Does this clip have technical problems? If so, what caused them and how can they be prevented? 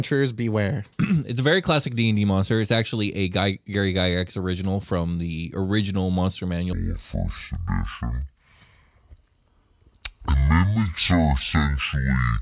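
Yes. Wrong sample rate from 6.73 s to the end: audio recorded at 16 kHz plays at 8 kHz, halving speed and dropping pitch an octave. Prevention: resample to the device's rate before playback.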